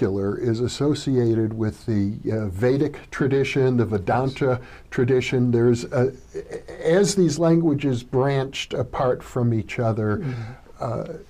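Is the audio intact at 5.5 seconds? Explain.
Yes, at 5.5 seconds the audio plays through intact, with no dropout, click, distortion or other fault to be heard at that moment.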